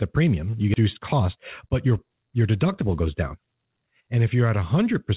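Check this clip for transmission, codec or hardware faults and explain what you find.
Two transmission faults show up in the speech.

Skip ahead, 0.74 to 0.76 s: a stretch of speech, about 0.7 s of it, was dropped while later audio was already queued. Nothing fills the gap, so the talk lurches forward and the two sides of the missing stretch butt together almost seamlessly.

Jitter buffer speed-up, 0.84 to 3.48 s: the buffer was still holding more audio than it targets, so it trimmed short pitch-period slices over and over, removing around 0.3 s in total. The speech plays at 110 % speed with unchanged pitch and sounds hurried.

The call-path bandwidth is audible as nothing above 4 kHz, which fits G.711 A-law.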